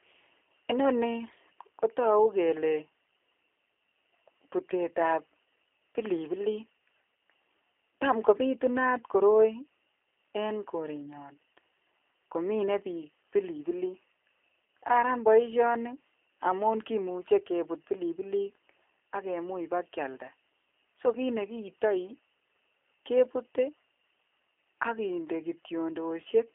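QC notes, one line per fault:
throughout, G.729 codec: the speech has passed through a low-rate CELP speech codec, consistent with G.729A at 8 kbit/s, which rebuilds each short frame from a vocal-tract model and a few pulses. Content is confined to about 300 Hz to 3.4 kHz, sounding plainly rough and synthetic.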